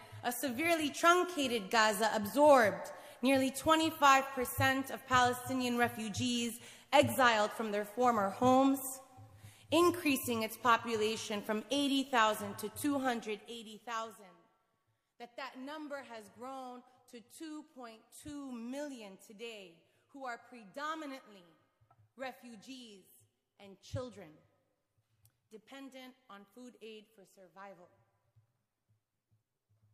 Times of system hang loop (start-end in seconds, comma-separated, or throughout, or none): none